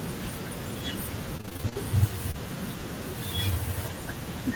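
Repeated packet loss with robotic sound runs from 1.37 to 1.77 s. Audio kept failing to arrive, in what sounds like about nine separate holes, the longest near 27 ms. Each was patched by extending the preceding sound, so about 45% of the stretch is synthetic, giving a choppy, mechanical texture.

Short concealed packet loss follows at 2.31 to 2.36 s. About 20 ms of audio never reached the decoder in time, and the receiver covered it with 26 ms of continued sound before blending back into the real signal, heard as a brief smear or wobble.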